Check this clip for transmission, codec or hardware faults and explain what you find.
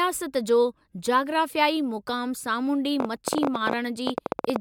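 One fault is present. A train of clicks runs from 3.00 to 4.57 s: about twenty similar pulses at roughly 14.8 per second, unevenly spaced, likely from nearby interference or a faulty connection, ticking well above the speech.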